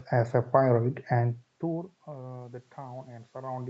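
No technical faults are audible.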